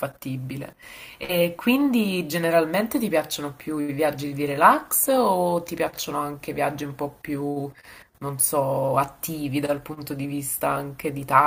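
At 1.23 s, a burst of packet loss breaks the speech until 1.43 s. Several consecutive packets went missing. The receiver extended the last sound for about 53 ms, fading it to a short buzz or hiss. Speech resumes with a stretch skipped.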